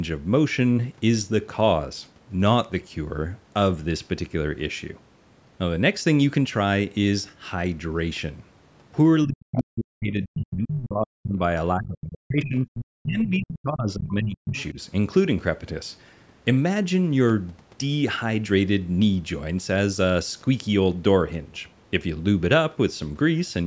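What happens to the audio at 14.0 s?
At 14.0 s the speech is caught by speech suppressed in double talk, running from 13.0 to 14.78 s. The speech drops sharply, by roughly 35 dB at its deepest. The likely cause is an echo canceller mistaking it for far-end echo during overlapping talk.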